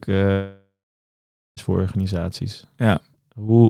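From 0.31 s to 1.60 s the speech cuts out, likely a long network dropout: the last sound trails into a fading buzz, then 0.87 s of near silence, and speech resumes at "voor organisaties" with 1.26 s lost. A spectrogram shows a smeared, decaying band, then a blank gap.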